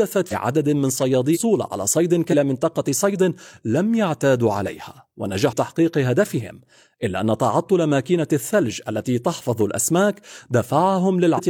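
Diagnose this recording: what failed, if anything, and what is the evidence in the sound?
What failed here is the codec stage: there's damaged data in a compressed stream. You hear five short glitches cutting into the speech at 0.28–0.33 s, 1.30–1.38 s, 2.28–2.35 s, 5.48–5.53 s and 11.34–11.40 s, each only 50 to 80 ms long. Some of the coded bytes got corrupted, so the decoder briefly misreads those frames and spits out garbage before it locks back onto the next valid frame header.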